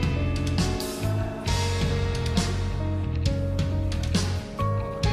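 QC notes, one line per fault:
Nothing to flag here, no faults turned up anywhere in this clip.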